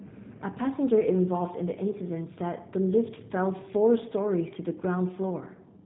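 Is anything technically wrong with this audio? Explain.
Yes, the speech runs through a G.729 codec for the whole clip, and the damage is plainly audible. It rebuilds the speech from a vocal tract filter, pitch predictor and sparse pulses, which fits an 8 kbit/s stream, so everything above 4 kHz is gone and it sounds rough and synthetic.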